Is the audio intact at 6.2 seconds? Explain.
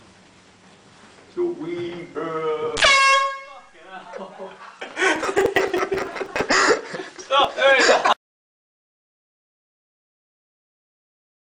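No, 6.2 s sits inside a burst of processor overload crackle from 5.16 to 6.41 s: dozens of missed, roughly 5 ms buffers replay old audio, giving gritty tearing.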